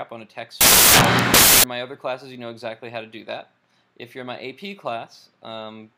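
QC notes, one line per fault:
0.61–1.64 s, samples built from the wrong bytes: for roughly a second the audio is replaced by loud, harsh broadband noise. The reader has assembled each sample from mismatched bytes, through a one-byte offset, swapped byte order or wrong alignment, so the rapidly fluctuating low-order bits land in the most significant position. The resulting values swing almost randomly.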